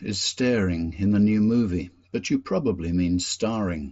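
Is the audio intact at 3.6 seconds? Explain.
Yes, at 3.6 seconds the speech carries on intact, with no dropout, click or other fault at that moment.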